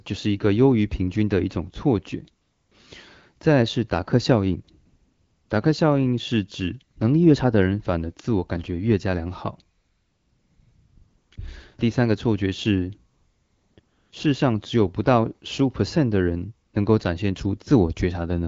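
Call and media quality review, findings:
AMR comfort noise: real background drops out and gets swapped for a flat, smooth hiss that cuts in and out. Seen at 2.41–2.71 s (300 ms), 4.85–5.49 s (640 ms), 9.77–11.31 s (1.54 s), 11.35–11.37 s, 13.13–13.77 s, 13.79–14.11 s and a 60 ms blip at 16.67 s. The phone called silence, stopped sending speech frames, and the far end synthesised noise from a rough level/spectrum sketch. The AMR-WB path underneath sounds clean, which fits 12.65 kbit/s.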